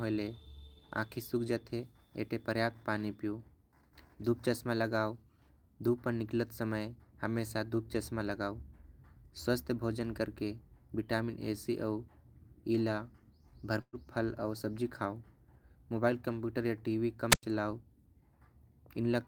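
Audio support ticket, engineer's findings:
Burst of packet loss, 13.81 to 13.96 s. Consecutive packets lost or late, so the receiver extends the last speech for about 114 ms, fading it, with roughly 40 ms of silence. About 120 ms of speech is skipped before playback resumes.

Wireless microphone squelch dropout, 17.30 to 17.43 s, just after "मोबाइल कंप्यूटर आऊ टीवी". The FM radio link fades and the receiver squelch mutes the output for about 98 ms. Heard as hiss rising, a near-silent hole, then speech returning.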